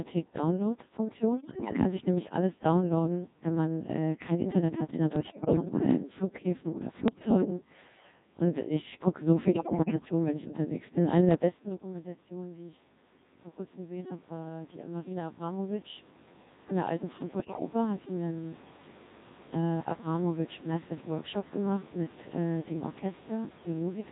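Speech carried through the Codec 2 vocoder at 1.6 kbit/s sounds robotic and buzzy throughout, because the voice is rebuilt from sine waves rather than the original waveform, unlike ordinary low-bitrate compression smearing. Bit errors on digital voice radio then cause sudden pitch, level and timbre jumps, bleeps and warbly gibberish at 1.37–1.73, 5.16–5.65, 7.08–7.5, 9.44–9.95 and 17.4–17.65 s. These are bursts of corrupted frame parameters, not dropouts or silence. The damage is heaviest in the first, second, fourth and fifth bursts, where roughly one bit in ten or more is flipped. The level change near 11.5 s is the talker moving and the background is room noise, neither a system fault.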